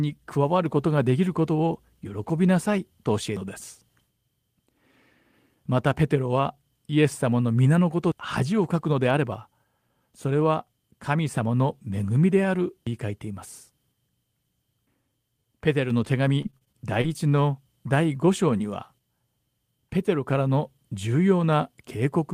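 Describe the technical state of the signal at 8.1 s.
At 8.12 s the speech skips forward abruptly. Roughly a third of a second is missing, and the two sides are butted together with no gap. This is audio missing between chunks, likely from a recorder handling the signal in 5-second pieces and dropping material at the handover.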